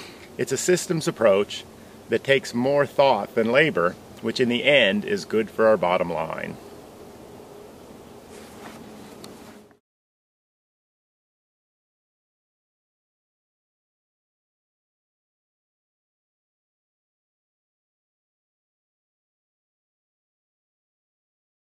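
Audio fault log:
No fault can be heard anywhere in this audio. Nothing in it calls for an entry in this log.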